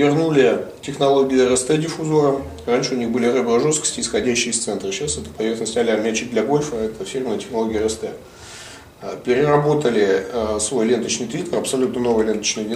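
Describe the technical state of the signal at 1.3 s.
At 1.3 s the signal is intact, with no dropout, distortion or other technical fault audible at that point.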